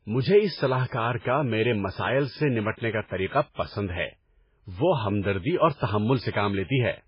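The speech sounds watery and swirly from start to finish, with a dull top end that stops at about 5.3 kHz. This is likely heavy MP3 compression, consistent with around 16 kbps, where the encoder discards the treble and lets weak frequency components flicker between frames.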